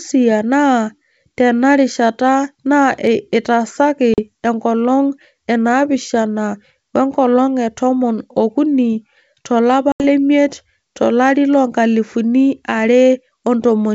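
Packet loss on an ADPCM call cuts hard-edged silent holes at 4.14 to 4.20 s, losing about 40 ms before "enkolong enaapishana we nkolong", and at 9.92 to 10.04 s, losing 80 ms after "tomon ookuni to lapa". Each gap spans a few packets. Because the decoder's predictor and step size drift from the sender's, the speech resumes with a brief level jump, click or distortion that settles within tens of milliseconds. The G.722 wideband coding itself stays clear up to 7 kHz, consistent with the full 64 kbit/s mode.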